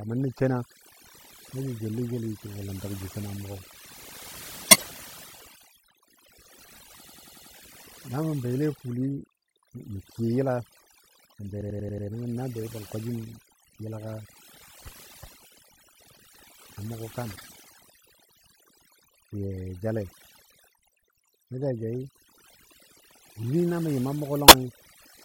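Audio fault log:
Throughout: overdone noise removal. The denoiser is set far too hard, so bands near its noise estimate are pulled down or shut off entirely. Quiet parts of the speech vanish along with the noise. The background drops and breaks up into twinkling specks. The processing reshapes the whole spectrum.
4.67–4.84 s, 17.31–17.52 s, 24.48–24.52 s: corrupt frame decoded. Each is a short chirp or burst of noise. Damaged bits in compressed frames were decoded and played anyway. Misread gains and codes put energy at wrong frequencies. The first two bursts each span several frames. The last is only a couple of frames, so it is a brief blip.
7.06–7.52 s and 11.61–12.07 s: system hang loop. The same 92.88 ms chunk plays five times over at 10.8 Hz. That is a machine-gun stutter. The length fits a 4096-sample ring buffer cycling while the system froze. The second loop falls after "sən be" and before "nəngən nan bei ban". 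Nothing seems skipped once playback resumes.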